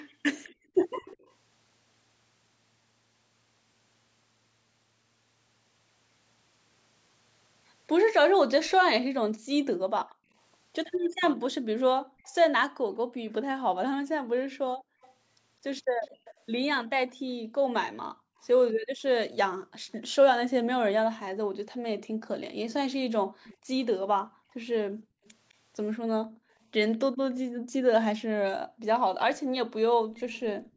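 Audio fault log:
0.0–1.32 s, 11.12–17.15 s, 23.44–30.76 s: echo leak. A far-end canceller likely let loudspeaker pickup through, so a faint copy of the speech trails 207 ms behind, roughly 20 to 25 dB down.
0.50–0.74 s, 9.08–30.15 s: background gated by the echo canceller. The canceller clamped the microphone during playback, dropping room sound by up to about 40 dB, briefly at first, then for roughly ten seconds in total.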